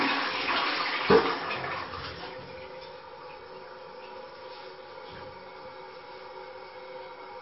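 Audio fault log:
Throughout, MP3 compression: the audio sounds dull and watery, with nothing above 5.6 kHz and a swirling, smeared texture on attacks. The likely cause is an encoder starved of bits that cuts the treble and drops weak frequency lines frame by frame. That fits a bitrate of around 32 kbps.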